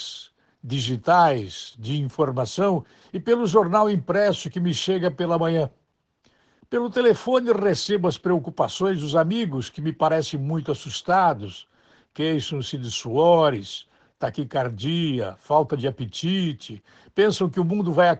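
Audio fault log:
throughout Opus voice compression: low-rate SILK coding, fitting about 12 kbps, caps the band near 8 kHz and coarsens the excitation, leaving speech muffled and hoarse.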